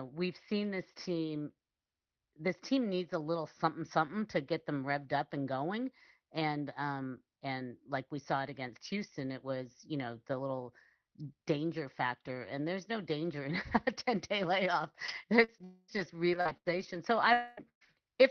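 From 15.07 to 16.97 s, just after "day layoff", repeated packet loss (robotic sound) sets in. Four separate gaps, the longest about 79 ms, are each patched by extending the preceding sound, and around 0.4 s in total ends up rebuilt. The speech turns choppy, with fragments missing.

Inside that stretch, from 15.64 to 15.91 s, there is what is likely a long network dropout. About 240 ms of audio is absent and is filled entirely by a continued, decaying continuation of the last sound rather than silence. The speech then resumes without the lost portion.

A second gap, likely of the same kind, runs from 17.33 to 17.60 s. Again about 240 ms is missing and covered by a fading continuation of the last sound, with no true silence before the audio returns.

At 17.57 to 17.61 s, a lost packet rebuilt from error correction follows. The decoder plays a low-bitrate redundant copy carried in the next packet, so there is no gap, but those 40 ms sound rougher and noisier. 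The same happens at 17.81 to 17.85 s.

Between 17.69 and 17.84 s, a burst of packet loss removes about 120 ms. The last sound is held only briefly before it dies away, leaving roughly 100 ms of silence before playback resumes past the missing material. The whole clip passes through an Opus call path whose top end stops near 6 kHz, and its coding noise points to a rate around 20 kbps.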